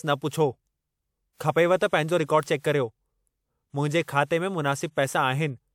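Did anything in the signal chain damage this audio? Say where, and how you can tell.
Yes: pre-echo at 4.03 to 4.08 s, from the codec stage. A short hiss rises over about 47 ms before a sharp speech onset, which arrives softened. The transform block spread its coarse quantisation noise across the quiet lead-in as well as the attack.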